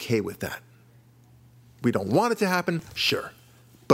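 It's a speech clip, and right after "don't want it to" there's a burst of processor overload crackle from 2.79 to 3.10 s. The machine kept missing its deadlines on what sounds like roughly 5 ms buffers, dropping around twenty of them and leaving a gritty run of tiny skips.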